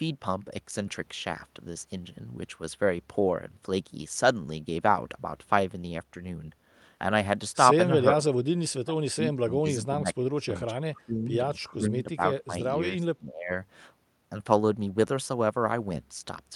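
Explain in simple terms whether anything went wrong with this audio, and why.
Speech suppressed in double talk runs through the middle of the clip, at 7.92–8.25, 8.73–9.21, 9.43–11.31, 11.67–12.21, 12.47–12.72 and 12.94–13.5 seconds. In these stretches the speech sinks, goes dull or breaks off in patches, sometimes dropping almost to nothing, worst around 8.7–9.2 seconds. The likely cause is the echo canceller: with both sides talking at once, it couldn't tell this talker from the returning echo and turned both down.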